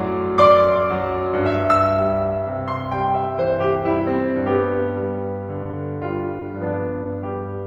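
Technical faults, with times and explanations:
5.63 to 5.67 s, short stall from a late packet: the music is briefly held, a 20 ms stretch of the last sound with a slight buzz or dip. A packet arrived late, the jitter buffer ran dry, and the receiver extended what it had. Playback then resumed 20 ms later without losing anything.
5.71 to 5.75 s, 6.39 to 6.43 s and 7.03 to 7.07 s, short concealed packet loss: each is a quick smear or wobble in the music. About 20 ms of audio never arrived in time, so the receiver continued the preceding sound to fill the gap before blending back into the real signal.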